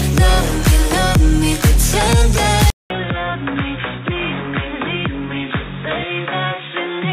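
At 2.70 s the sound drops out for about 200 ms, then returns roughly 10 dB quieter, dull and boxy, with nothing above 3.8 kHz and a faint new background noise sitting far below the signal. It stays that way to the end. This points to the input likely having been switched to a poorer device, such as another microphone or a headset's call profile, whose narrower band, lower level and own noise replace the original pickup.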